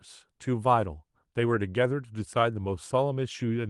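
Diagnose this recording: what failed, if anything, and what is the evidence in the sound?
Nothing in the speech points to a failure at any stage: the signal has the ordinary character of a call path through an Opus codec, with the spectrum extending up to about 12 kHz and a coding texture consistent with a rate of roughly 32 kbps, and nothing disturbs its continuity or level at any point.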